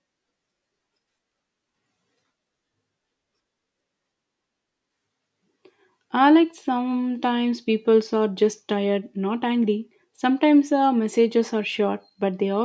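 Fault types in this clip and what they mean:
No technical faults can be heard in this speech recording. Nothing in it calls for a fault entry.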